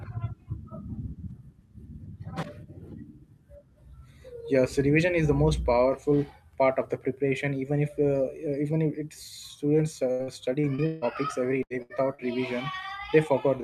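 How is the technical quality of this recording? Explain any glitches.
The last few seconds of the recording are degraded by packet loss in a cluster of faults between 10.1 and 12.2 s.

Repeated packet loss (robotic sound) runs from 10.11 to 11.05 s, just after "if it's students". Five separate gaps add up to about 360 ms of missing audio, the longest 154 ms. The receiver patches each gap by extending the preceding sound, so over a third of that span is synthetic continuation. The speech turns choppy, with fragments dropped out.

Two bursts of packet loss follow, at 11.63 to 11.73 s and 11.82 to 11.96 s, each losing about 80 ms in a row. In both, the decoder holds the last sound and fades it, giving a brief buzz or hiss before the speech resumes further on, with the intervening audio gone. The second burst also adds roughly 10 ms of extra duration, which slightly shifts the timing afterwards.

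Short concealed packet loss occurs at 12.15 to 12.22 s, where about 40 ms failed to arrive in time. The receiver bridges the hole by continuing the previous pitch or noise and then crossfading back into the real signal. The result is a quick smear or wobble, and a brief consonant there can be lost entirely.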